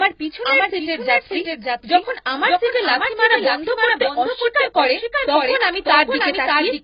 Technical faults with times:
0.00-6.83 doubled audio track
0.00-6.83 AAC compression

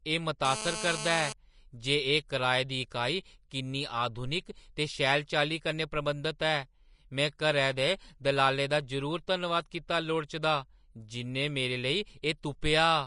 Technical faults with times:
0.00-13.06 Vorbis compression
0.45-1.33 GSM phone buzz

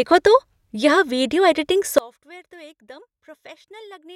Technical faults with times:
1.98-4.15 one channel inverted

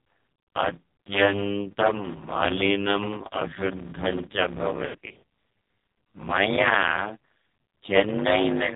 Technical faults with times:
0.00-8.75 block size mismatch (padded)
0.00-8.75 AMR narrowband mobile codec
4.86-5.23 lost AMR speech frames

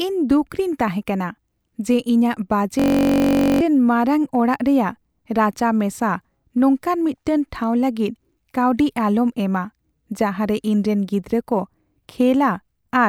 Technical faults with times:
2.79-3.61 system hang loop

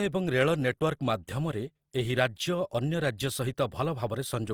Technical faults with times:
0.00-4.53 Opus compression

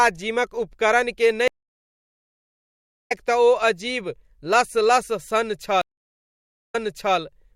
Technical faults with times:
1.48-3.12 stream reconnect
5.81-7.17 stream reconnect

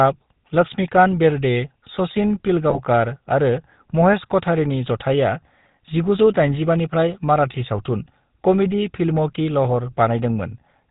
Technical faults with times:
0.00-10.90 GSM full-rate codec
2.70-2.79 GSM bit errors

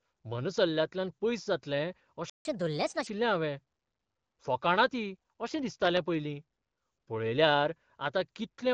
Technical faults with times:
2.30-2.45 playback stall
2.45-3.07 catch-up at higher speed
5.51-6.14 processor overload crackle

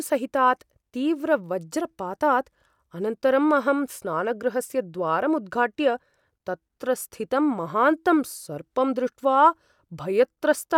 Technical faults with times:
none

